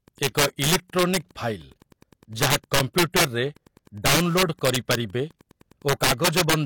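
Running under the whole thing there's Wi-Fi interference: a faint tick about ten times a second, sitting well below the speech. That's a nearby radio's beacon, every 102.4 ms, getting picked up and rectified by the audio circuitry, so it shows up as a steady buzzy pulse.

From 0.23 to 1.17 s you get the first integer overflow. The loud peaks pushed about 6 dB past the top of the integer range and wrapped around to the opposite sign instead of being clamped. So rather than the soft flattening of clipping, each peak snaps as a harsh, violent crack. It comes back, nastier, from 2.42 to 3.25 s, with the signal about 11 dB over.

Right in the middle of that stretch, at 2.80 s, there's a gap between stream segments. The timestamps on either side of a segment boundary didn't line up, and the player filled the hole with about 5 ms of silence. You hear it as a tiny hard-edged dropout, but nothing's actually missing.

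The overflow cracking returns twice more: from 4.06 to 4.95 s with about 9 dB of overdrive, and from 5.89 to 6.54 s at about 10 dB.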